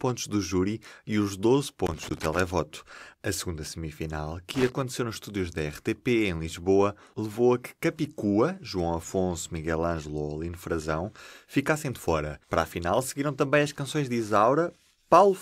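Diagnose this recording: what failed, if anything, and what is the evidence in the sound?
Loose connector crackle in the analogue wiring. Irregular scratchy bursts at 1.86–2.38 s and 4.55–4.81 s. A worn contact repeatedly breaks, chopping the signal into crackle.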